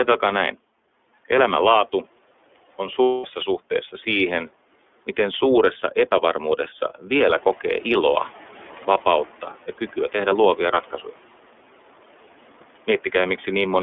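The whole clip of speech runs through the iLBC codec, and its damage is plainly audible. The line band sits at about 300 Hz to 3.5 kHz, so everything above that is missing. The voice has that slightly rough, synthetic edge you get when each 30 ms frame's excitation is coded on its own. The sound fits iLBC's 13.33 kbit/s mode.

From 3.03 to 3.26 s there's a burst of lost iLBC frames, right before "suhteessa siihen miten suuressa". The decoder covers the 210 ms hole, which fits seven lost 30 ms frames, by repeating the last pitch cycle with noise mixed in. So you hear a held, faintly buzzy vowel. Since iLBC frames don't depend on each other, the voice snaps back cleanly as soon as real frames arrive again.

Right after "siihen miten suuressa epävarmuudessa", around 7 s, the room noise jumps by about 11 dB. From 7.2 to 9.27 s you can hear the noise suppressor catching up. Its noise estimate is still tuned to the quieter room, so the new noise comes through with little reduction at first. 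Over about 2.07 s it sinks by about 9 dB as the estimate adapts, and it ends up roughly 20 dB below the speech.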